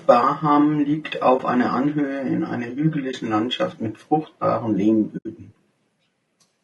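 Across the whole speech clip the sound is rough and grainy, with a hiss-like fill between the harmonics and a thin, synthetic top end. This is likely low-delay AAC compression of the AAC-ELD kind used in video calls, at a rate that points to about 32 kbps. At this low bitrate the damage is plainly audible. On a spectrogram the harmonic stripes look smeared, noise fills the gaps between them, and the upper band appears patchy or blocky.

AAC frame loss with muting occurs at 1.37 to 1.40 s and at 3.12 to 3.14 s, each a single dropout of about 20 ms, and again from 5.17 to 5.26 s, a longer hole of about 80 ms. When a frame is lost the decoder zeroes its spectrum, and the overlapping windows fade the sound out and back in rather than cutting it abruptly, so each gap is soft-edged. On a waveform the envelope dips briefly at the two single losses, and at the longer one it tapers down to silence and rises again. 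On a spectrogram each loss is a soft-edged vertical gap across all frequencies, and the one at 5.17 s is noticeably wider.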